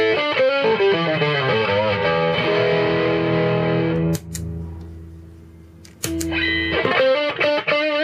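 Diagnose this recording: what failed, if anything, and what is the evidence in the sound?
The codec stage failed: a corrupt frame was decoded and played. At 2.02 s there is a brief, isolated blip lasting about as long as a single compressed frame, with its peak near -20 dBFS. The corruption left the frame's bitstream decodable but wrong, so misread gain or spectral codes placed energy at frequencies unrelated to the surrounding audio. The decoder's output for that frame is the artefact, and the next frame decodes cleanly again.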